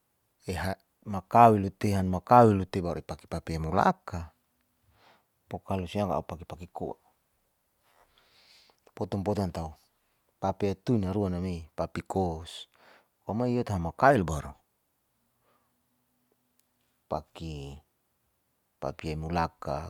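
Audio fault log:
No faults found on listening to this speech clip, and none to log.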